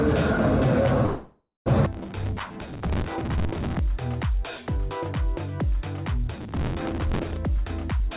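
From 1.06 to 1.68 s the sound stalls into a fading buzz that sinks to silence for its last 0.2 s, then resumes exactly where it stopped. This is a call audio freeze, likely from packets being delayed until the jitter buffer ran empty. The receiver filled about 0.6 s with stretched-out sound, and nothing was lost.

From 1.93 to 3.79 s, and again from 6.34 to 7.37 s, a gritty, tearing crackle rides over the sound, confined like everything else to the G.711 call band that stops at 4 kHz. This is processor overload crackle. The processor missed buffer deadlines in long runs, and each late buffer replayed a scrap of old audio with hard edges. The fineness of the grain fits buffers of roughly 5 ms.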